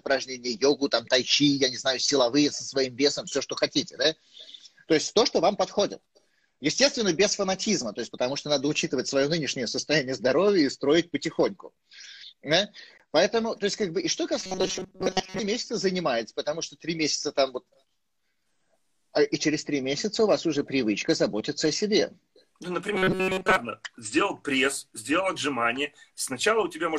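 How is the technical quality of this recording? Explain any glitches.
The recording has two glitches of the same kind. From 14.40 to 15.40 s and again from 22.95 to 23.57 s there is robotic sound from repeated short buffers: a rigid metallic buzz at 188 Hz, likely caused by audio arriving too seldom so that a roughly 5 ms stretch is replayed over most of each passage. Unlike a plain dropout, which leaves silence, the gap is filled with a fixed pitch that loosely tracks the sound.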